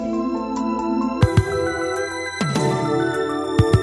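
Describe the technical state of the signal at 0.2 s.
At 0.2 s the signal is intact, with no audible dropout, distortion or other fault at that point.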